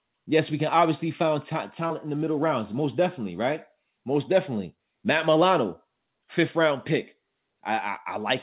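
Nothing stood out on listening to this speech recording, which carries the expected narrow top end of a G.711 call path with nothing audible above about 4 kHz.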